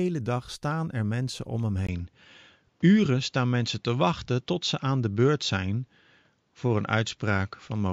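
An input switched to a poorer device, most likely, at 1.87 s, right after "er mensen om hem", and the change holds to the end. A brief silence of about 20 ms marks the switch. From there the sound loses everything above 7.4 kHz, so it turns duller and narrower, and a faint new background noise appears, roughly 45 dB below the signal. The loudness stays about the same, which points to a change of microphone path rather than a gain change.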